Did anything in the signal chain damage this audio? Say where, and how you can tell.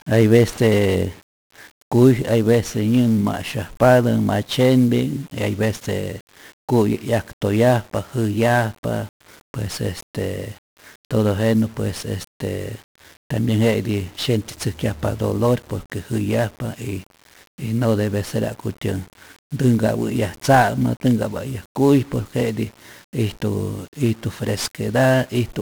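Yes: 1-bit DFPWM compression at the codec stage, running through the whole speech clip. A strong broadband fuzz and crackle sits on every syllable, and the upper frequencies are swamped by hiss. That is the signature of a coder that keeps only one bit per sample, nudging an adaptive level up or down each time, so quantisation error is large and spread everywhere. The heavy damage fits a stream of around 48 kbps.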